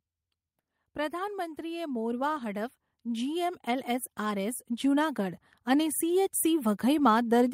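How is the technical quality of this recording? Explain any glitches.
The level is unsteady: from 0.95 s to 6.83 s the speech and the background noise swell together, climbing steadily by about 12 dB over nearly six seconds. This is automatic gain rising. The automatic gain control judged the incoming signal too quiet and kept pushing its gain up gradually. Because it amplifies everything it receives, the room tone grows along with the talker rather than the voice alone getting louder.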